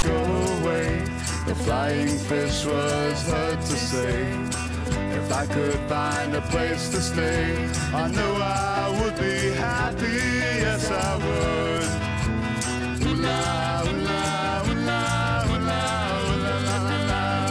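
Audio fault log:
0.00–0.03 s file tags played as audio: a hard-edged burst of rasping static, offset to one side, then brief silence, as text tags and zero padding are read as samples.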